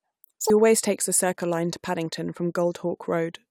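Speech clip. Its first 0.5 s, before "always takes the", shows audio read two samples at a time (double speed): sample pairs treated as single frames play at 2x, an octave higher.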